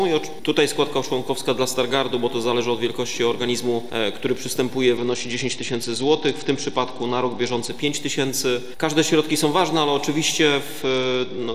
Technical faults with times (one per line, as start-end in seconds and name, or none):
4.97-7.70 Bluetooth SBC bit pool drop
10.82-11.55 Bluetooth SBC bit pool drop